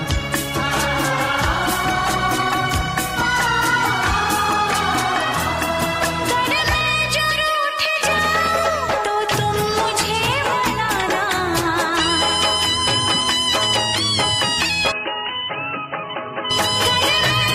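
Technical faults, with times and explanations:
14.92–16.51 s, input switched to a poorer device: the sound abruptly narrows, with nothing above 3 kHz, so it turns dull and boxy, drops about 5 dB in level, and gains a new background noise sitting roughly 30 dB under the signal. There is no gap at the change. This is likely the recording input jumping to a narrower-band microphone or headset call profile, whose own response, gain and noise floor replace the original until the full-band sound returns.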